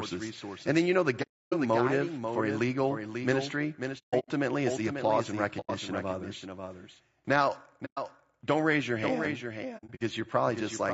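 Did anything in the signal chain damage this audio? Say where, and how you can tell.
Yes. Throughout the clip, the speech has a second full-band copy trailing it by about half a second, at roughly 5 dB below the original. The echo is clean, with no decay or room colour, which rules out acoustics. This doubled audio track most likely comes from a stage where the signal is captured twice, such as a slower monitoring path mixed back into the recording, or from an edit that left two copies out of step.

The voice is rough and grainy throughout, with noise filling the gaps between harmonics and a thin, synthetic-sounding top end. That is plainly audible codec damage, likely from low-delay AAC compression (AAC-ELD). Its short frames resolve pitch harmonics poorly and spend bits inefficiently, so at a low bitrate, which this fits at around 32 kbps, voices break up this way.

There are five soft-edged holes where the sound fades out and back in. 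The first runs from 1.22 to 1.54 s, right after "then you know the". The second is a broken cluster from 3.98 to 4.29 s. The third runs from 5.60 to 5.70 s, after "is the applause and". The fourth runs from 7.85 to 7.99 s, just before "don't raise your". The fifth is another scattered run from 9.77 to 10.02 s. This is AAC frame loss with muting: the decoder zeroed the spectrum of missing frames, and the overlapping windows smoothed the edges.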